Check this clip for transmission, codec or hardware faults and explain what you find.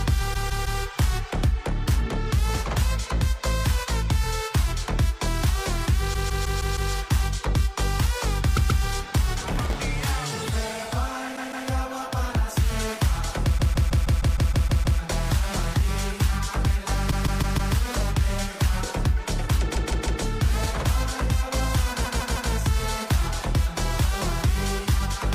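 Two kinds of fault are present: a recurring stutter from repeated frames, and one short burst of processor overload crackle.

Repeated frames occur at 0.33–0.80 s, 6.13–6.91 s, 8.56–8.82 s, 11.35–11.67 s, 13.57–14.98 s, 17.10–17.73 s, 19.74–20.21 s and 22.04–22.51 s. A block of compressed data was delivered more than once, so the decoder replays the same slice. Mostly that slice is 156.7 ms long, which fits about six frames. At 8.56 s it is 130.6 ms. The slice plays again two to nine extra times, longest at 13.57 s. This gives a looping stutter and adds roughly 4.8 s overall.

Processor overload crackle runs from 9.52 to 9.78 s. The processor repeatedly failed to fill its audio buffers on time. The sound points to very small buffers of about 0.7 ms, with a few dozen missed in a row. Each miss left a brief hole of silence with hard edges. Packed together, these holes produce a gritty crackle that sits on the sound and stops once the load clears.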